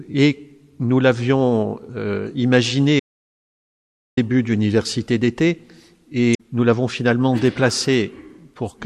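At 3.00 s the sound cuts out into silence, with no room tone, until 4.17 s; this audio dropout to silence likely came from lost input while recording continued. From 6.31 to 6.40 s a brief glitch appears, the mark of damaged data in a compressed stream, where corrupted frames made the decoder lose sync.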